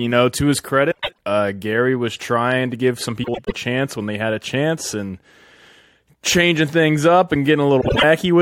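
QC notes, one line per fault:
0.91–1.19 s, 3.24–3.52 s and 7.81–8.04 s, frames out of order: each stretch is a garbled flutter. Two neighbouring blocks of about 105 ms (78 ms in the last) play swapped, which fits four-frame and three-frame runs. No time is lost.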